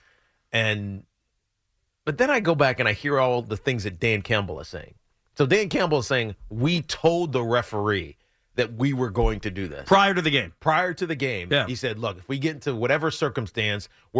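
Speech recording, with no technical faults to report.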